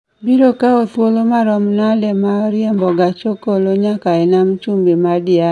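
A short speech recording with no audible technical fault anywhere in the signal.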